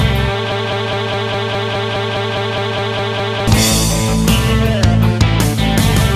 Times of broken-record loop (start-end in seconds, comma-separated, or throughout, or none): 0.52-3.47